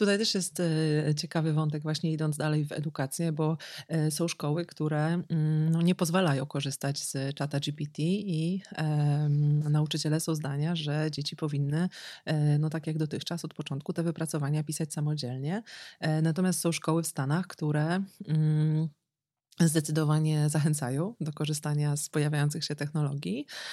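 No technical faults are audible.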